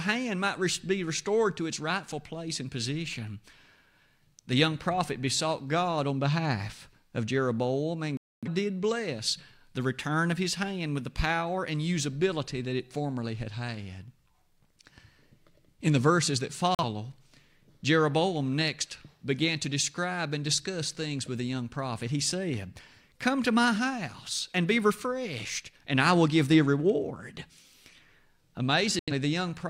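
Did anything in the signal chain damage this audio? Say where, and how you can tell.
Yes. The damage is at digital broadcast reception: a digital broadcast dropout. The speech mutes three times. The first hole runs from 8.17 to 8.48 s, just before "did bless the return". Another follows "the verses that", from 16.75 to 16.84 s. The last spans 28.99 to 29.12 s. Each gap is clean silence, not noise. The receiver discarded failed frames and muted until valid ones returned. The first gap fits several frames lost in a row. What was sent meanwhile is gone.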